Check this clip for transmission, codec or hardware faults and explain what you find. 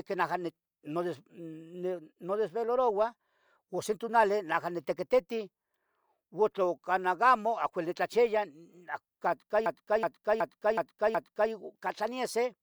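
One fault, a system hang loop, from 9.66 to 11.52 s. The system froze while the sound hardware kept replaying its ring buffer, so a single 0.37 s stretch of speech repeats five times at about 2.7 Hz, a skipping-record repeat that fits a 16384-sample buffer.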